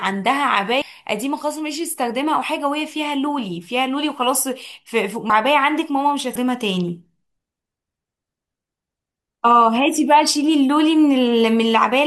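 Speech with compressed frames skipped at 0.82, 5.30 and 6.35 s: the audio jumps ahead by roughly half a second, a bit less, and about a fifth of a second, consistent with dropped or rejected frames of what sounds like a 32 ms frame codec.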